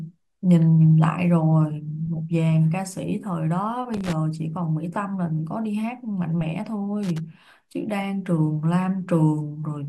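Speech, interrupted twice by loose connector crackle. The first burst runs from 3.94 to 4.13 s. The second runs from 7.03 to 7.18 s. Each lasts under a fifth of a second. Both sound like irregular scratching laid over the speech. A worn or dirty contact in the cable or jack is touching and separating very quickly. That chops the signal on and off. Any DC present on the line turns each break into a pop.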